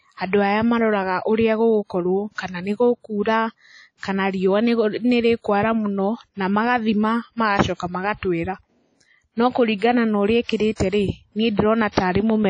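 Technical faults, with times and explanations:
Throughout: WMA compression. The speech sounds washy and ringing. A hiss rises and falls with the signal. Nothing is heard above 10 kHz, so the top of the sound is cut off. The damage is plainly audible. This is likely a WMA-type transform codec at a low rate, which fits a 32 kbps stream. Long blocks spread the quantisation noise over tens of milliseconds, and weak spectral lines are discarded.
3.98 to 4.03 s, 9.79 to 9.82 s, 10.43 to 10.49 s, 10.56 to 10.60 s and 10.89 to 10.92 s: pre-echo. A short hiss arrives just before each sharp attack, and the attack sounds softened and smeared. The hiss leads by 55 ms at 3.98 s and 10.43 s, and by 30 to 34 ms elsewhere. The attack falls late in a coding block. Noise sized for the loud part is spread evenly over the whole block, so it also fills the quiet moment before the attack.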